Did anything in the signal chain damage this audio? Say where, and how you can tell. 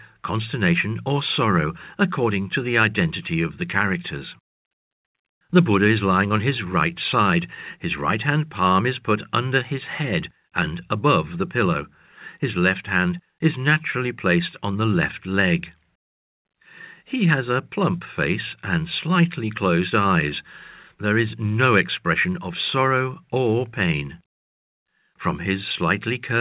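No, nothing in the signal chain stood out on listening; the speech comes through the call path as expected, with the narrowband sound of a G.711 mu-law link and nothing above 4 kHz.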